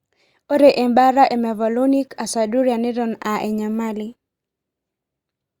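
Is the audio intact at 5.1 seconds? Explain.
Yes, the speech at 5.1 seconds is intact, with no dropout, click, distortion or other fault at that moment.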